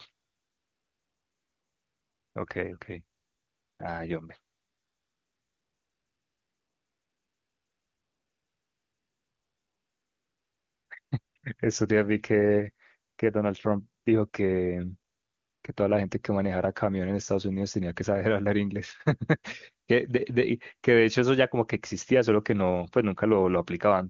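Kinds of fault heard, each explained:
AMR comfort noise: pauses lose their real background to a steady, smooth hiss, longest from 4.55 to 10.89 s, because the phone stopped sending speech frames.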